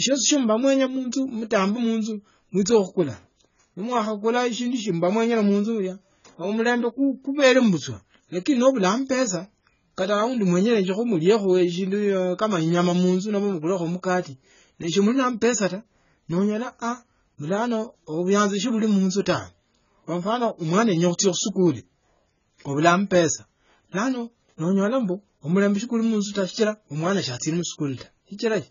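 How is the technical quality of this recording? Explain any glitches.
The technical quality is poor. The whole recording is heavily degraded. From start to finish, nothing is present above 7 kHz. The speech sounds dull and muffled, and sibilants come out smeared and fizzy. Sustained sounds carry a warbling texture. The likely cause is AAC compression at a very low bitrate, which fits something near 16 kbps. At that rate the encoder lowers its cut-off and starves the spectrum. Bands are left with holes or filled with substitute noise.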